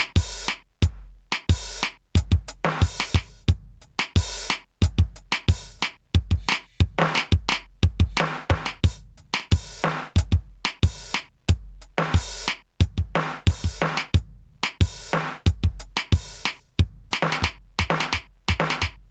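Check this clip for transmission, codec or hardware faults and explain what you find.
One fault runs through the whole music clip: gain pumping. The input gain was likely set far too high, so a fast limiter clamps each loud moment, swinging level by around 15 dB. Loud and soft parts end up closer in level, leaving the music squashed. The call's microphone processing, which stops everything above 8 kHz, is working as expected.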